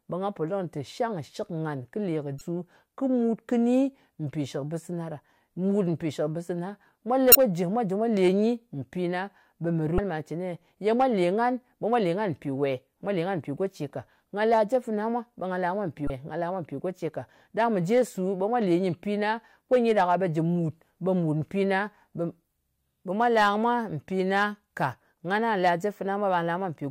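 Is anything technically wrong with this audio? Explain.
Yes. Short glitches of about 35 ms break into the speech at 2.38–2.41 s, 7.32–7.35 s, 9.96–9.99 s and 16.07–16.10 s, the last just after "la mwa mpi". This is damaged data in a compressed stream: corrupted bytes make the decoder misread frames, lose sync and search for the next valid header.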